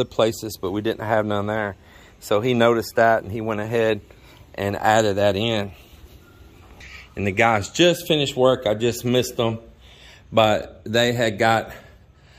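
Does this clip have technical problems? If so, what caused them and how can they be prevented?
No, nothing in this recording points to a technical fault, so there is no cause to trace and nothing to prevent.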